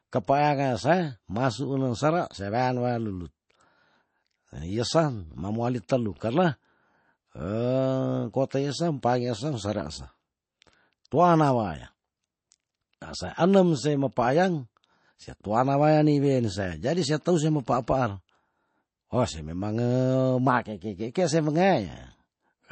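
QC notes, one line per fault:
throughout MP3 compression: likely a starved encode, fitting roughly 32 kbps, removes everything above 8.3 kHz and flickers weak detail, leaving the speech dull and watery.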